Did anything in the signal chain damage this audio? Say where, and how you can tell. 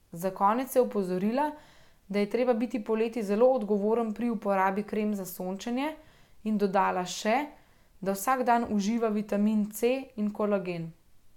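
No, nothing along the chain left a mark on this speech that I can hear, so there's no stage to point at.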